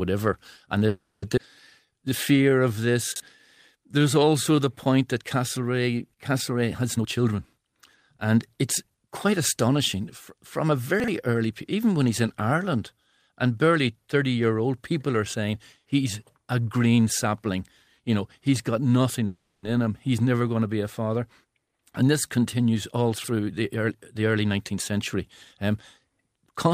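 At 0.87 to 1.24 s a call audio freeze inserts a 350 ms gap: the last speech sound is extended as a fading buzz or hiss, likely because delayed packets emptied the jitter buffer. Speech then resumes without loss. The same fault recurs at 19.26 to 19.65 s, filling 370 ms.

At 1.36 to 1.39 s a skip ahead drops roughly a third of a second of speech, splicing the two sides together almost directly.

A jitter buffer slow-down runs from 1.86 to 2.93 s at 87% speed, adding 150 ms, and again from 3.77 to 4.66 s at 89%, adding 109 ms, just before "point that". Repeated pitch periods stretch the sounds at unchanged pitch.

Chunks out of order at 3.12 to 3.20 s and 11.00 to 11.08 s play one 40 ms chunk a slot late. At 23.16 to 23.28 s a chunk plays two slots late. Each produces a brief jumbled moment.

A jitter buffer speed-up trims pitch periods to reduce buffer delay. It runs at 117% from 6.96 to 7.73 s, removing roughly 150 ms. 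It runs at 106% from 8.16 to 11.73 s, ending at "when he's in", and at 110% from 21.44 to 25.15 s, after "be a father". In each stretch the speech sounds hurried.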